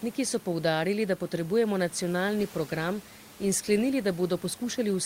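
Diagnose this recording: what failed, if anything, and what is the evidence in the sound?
Nothing failed in this recording; the only thing in the sound besides the speech is the room's own background noise, about 25 dB below it.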